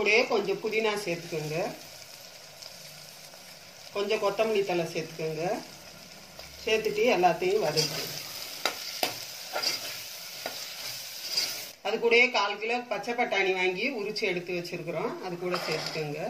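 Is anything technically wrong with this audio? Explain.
No, there are no technical faults.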